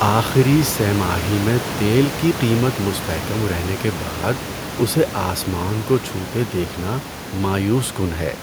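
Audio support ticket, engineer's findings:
Nothing stood out on listening; the only background is room noise sitting about 12 dB below the speech, which belongs to the recording space rather than the system.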